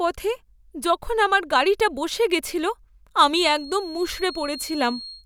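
From 3.26 s to the end there's a feedback whistle, a thin 4.3 kHz tone about 15 dB under the speech, likely from a speaker-to-mic loop hovering at the edge.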